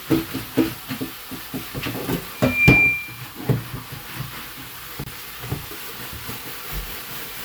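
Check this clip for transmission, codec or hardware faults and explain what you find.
Two faults: a feedback squeal and a short codec join gap.

Loudspeaker feedback squeal, 2.34 to 3.3 s. A microphone in the chain is picking up the loudspeaker it drives, and at 2.4 kHz the loop gain rises above one, so that frequency regenerates itself on every pass. You hear a pure tone at 2.4 kHz swell up over roughly a third of a second and hold at about 15 dB above the sound around it, until the squeal stops at 3.3 s.

Gap at a join of encoded pieces, at 5.04 s, lasting 26 ms. The audio was encoded in separate pieces and then joined without trimming, so one run's padded final frame and the next run's start-up delay both stayed in the stream as silence. Continuous sound drops out across a 26 ms gap, with its edges smeared by the codec so the fully silent part is shorter, and then carries on from exactly where it stopped.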